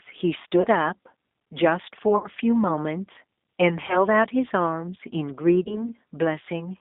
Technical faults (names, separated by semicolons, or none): G.729 codec; VoIP packet loss concealed by the speech codec